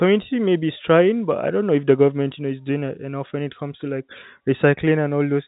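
The speech comes through a G.711 telephone coding path with no faults, its band stopping at about 3.8 kHz as that format requires.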